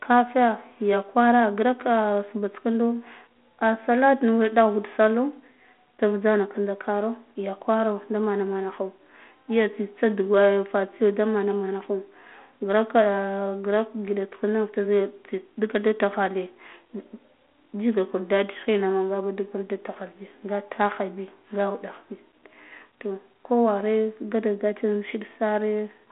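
No technical faults occur anywhere in the speech. The audio comes through a G.726 ADPCM path at 32 kbit/s, so it sits in a telephone band of roughly 200 Hz to 3.4 kHz with nothing above 3.8 kHz, and carries only a light trace of the coding.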